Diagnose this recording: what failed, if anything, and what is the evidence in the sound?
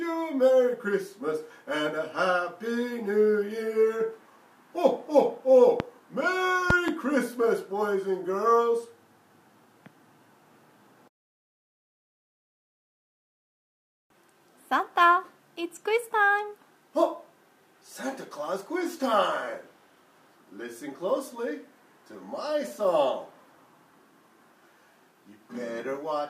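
A loud pop occurs at 5.80 to 5.82 s, a single sharp pop about 15 dB above the sound, and again at 6.70 to 6.91 s, where two pops arrive in quick succession, peaking about 20 dB above it. The sound carries on underneath both. The stage is likely the analogue wiring, where a plug, switch or static discharge injects a sudden voltage step that the following circuits shape into a brief thump.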